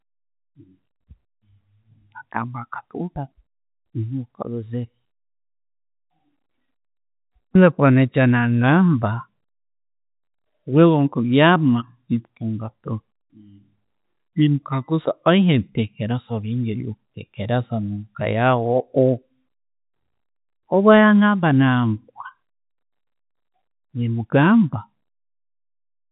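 No faults found in this speech recording, which arrives over G.711 telephone coding with nothing above 3.8 kHz.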